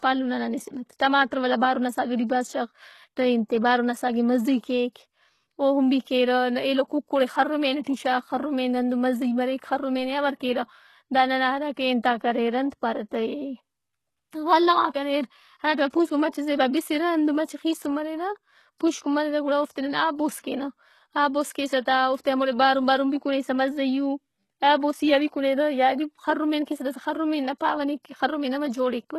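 Throughout, the speech has gritty, metallic treble and nothing above 12.3 kHz. The likely cause is HE-AAC compression, with a sound that points to about 16 kbps.

Pre-echo softens attacks at 7.83, 14.89, 20.40 and 21.81 s. Codec noise spreads across each block, so a 33 to 49 ms hiss precedes the onset.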